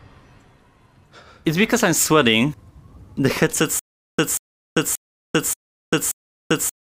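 From 3.79 s to the end, the audio breaks into a stutter with silent gaps. A fragment of about 188 ms repeats five times, each followed by roughly 392 ms of digital silence, giving an even cycle of about 580 ms. The likely cause is a stalled player or stream that replayed its last buffered fragment on each retry and then ran dry. The sound that should have filled this stretch never plays.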